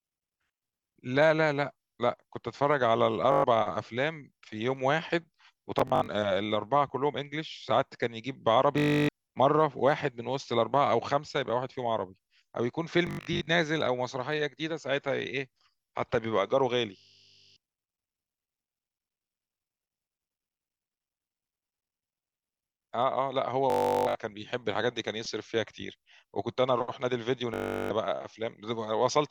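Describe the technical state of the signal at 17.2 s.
At 17.2 s you're inside a Bluetooth stutter running 16.97 to 17.56 s: packets dropped, the receiver loops its last short slice into a buzz, then the speech jumps ahead.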